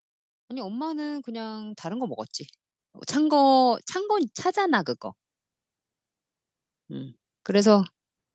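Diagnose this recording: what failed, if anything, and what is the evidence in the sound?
Automatic gain rising, in the call processing stage, from 0.49 to 2.29 s and again from 3.14 to 4.95 s. Voice and background swell together over nearly two seconds each time, by about 9 dB and then about 6 dB. The gain control judged the microphone level too low and ramped its gain up slowly. Because the whole signal rises, room noise climbs with the speech. The Opus call path limits the audio to 8 kHz throughout.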